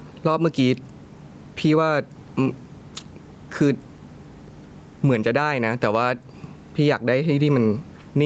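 Gain pumping runs through the whole speech clip, likely from input gain set far too high with a fast limiter clamping each loud syllable. The gain swings by around 10 dB, leaving the level squashed and breathing.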